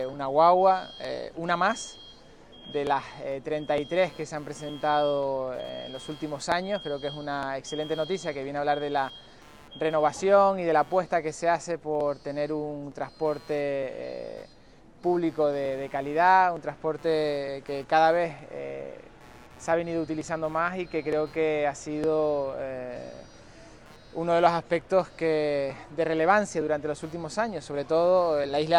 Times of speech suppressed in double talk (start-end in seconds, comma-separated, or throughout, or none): none